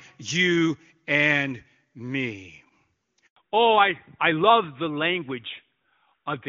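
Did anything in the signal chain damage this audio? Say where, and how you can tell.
Yes. Handover gap, network stage, 3.26 to 3.36 s: the speech drops to silence for 100 ms while the call switches links and no frames arrive.

Fallback to narrowband, codec stage, from 3.36 s onward: the HD Voice band is lost, with nothing above 4 kHz, and speech turns duller and rougher, which fits AMR-NB at 12.2 kbit/s.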